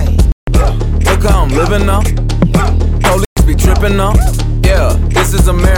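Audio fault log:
0.32–0.48 s and 3.25–3.37 s: Bluetooth stall. The sound cuts to silence for 154 ms, then for 119 ms, and then continues. Each gap likely comes from radio interference holding up packets. The headphones' buffer empties, so playback halts until resent data arrives.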